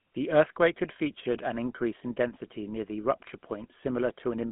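From start to finish the speech runs through a GSM full-rate codec, the rough 13 kbps sort of sound. The band sits at roughly 150 Hz to 3.4 kHz with nothing above 3.8 kHz, and the coarse pulse-driven excitation leaves a plainly audible buzzy, gravelly edge on every voiced stretch.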